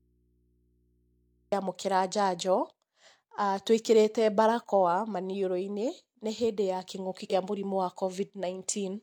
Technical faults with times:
0.00-1.52 audio dropout to a faint residue
7.27-7.32 damaged data in a compressed stream

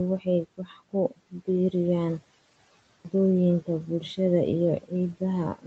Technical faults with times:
0.57-1.48 speech cut by the noise suppressor
2.75-3.05 clipped start after a pause

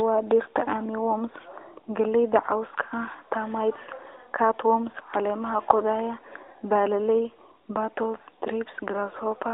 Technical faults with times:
none

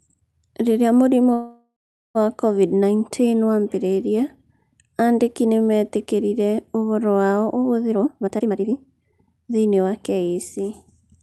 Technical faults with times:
1.33-2.17 call audio freeze
7.91-9.87 jitter buffer speed-up

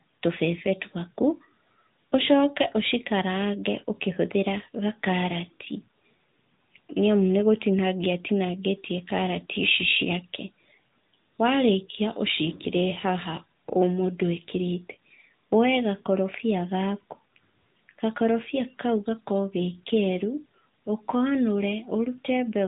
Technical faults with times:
0.00-22.67 AMR narrowband mobile codec

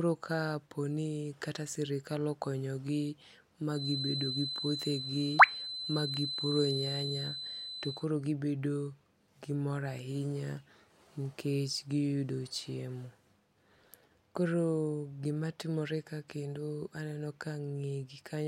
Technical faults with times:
3.70-8.08 feedback whistle

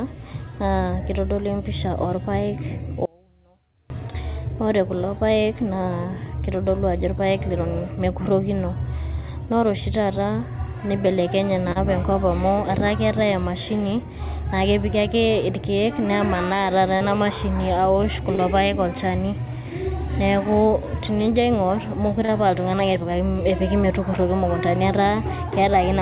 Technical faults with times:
3.05-3.90 audio dropout to a faint residue
11.72-11.78 short concealed packet loss
16.97-17.03 short concealed packet loss
18.35-18.41 short concealed packet loss
22.25-22.31 short concealed packet loss

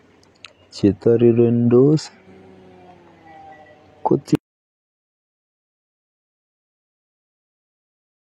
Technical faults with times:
4.35-8.22 audio dropout to silence

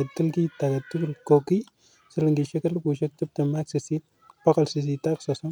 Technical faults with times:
1.48 overlapping chunks
3.49 overlapping chunks

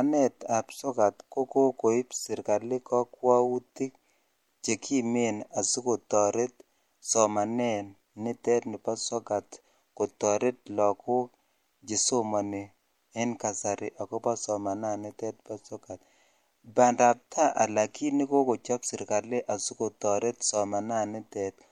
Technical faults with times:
0.00-21.71 MP3 compression

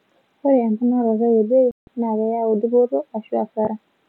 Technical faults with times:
1.71-1.88 digital broadcast dropout

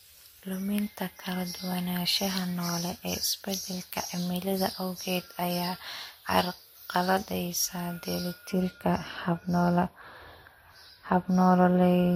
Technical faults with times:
0.00-12.16 transcoding between lossy codecs
0.00-8.51 pre-emphasis left on

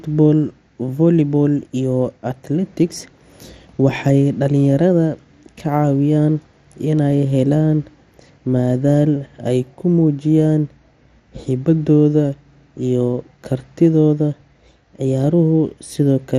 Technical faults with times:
0.00-16.38 MP2 compression

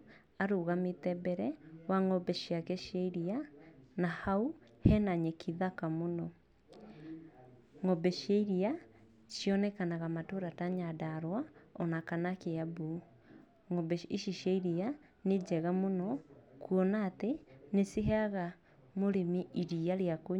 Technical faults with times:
none

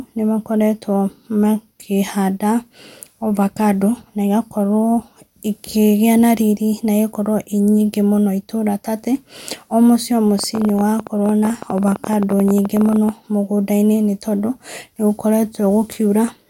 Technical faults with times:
10.39-13.10 train of clicks

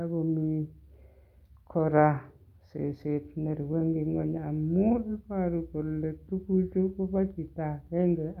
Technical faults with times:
none

